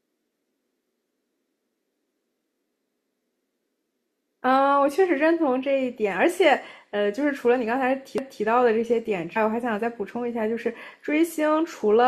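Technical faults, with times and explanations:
8.18–8.43 s, overlapping chunks: at a join between 5-second processing chunks, the next chunk began before the previous one finished, so 250 ms of speech plays twice, heard as a stutter. The waveform shows that stretch duplicated, with a discontinuity and vertical spectrogram line at its start.
9.35 s, damaged data in a compressed stream: corrupted bytes made the decoder misread a frame and lose sync before locking onto the next header, producing a brief glitch. The spectrogram shows a short broadband smear; the waveform shows an abrupt splice.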